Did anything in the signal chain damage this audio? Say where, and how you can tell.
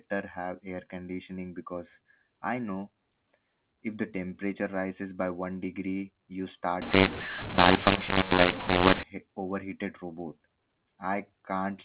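Yes. From 6.82 s to 9.03 s, right after "degree you" and up to "overheated robot", the speech turns harsh and gritty, its loudness lurching unevenly, with a hiss that fills the small gaps instead of falling to silence. This is a mu-law and A-law mix-up at the codec stage: samples encoded with the A-law curve of this 4 kHz-limited G.711 telephone coding were decoded using mu-law, so every level maps to the wrong value and the quietest ones are pushed well above zero.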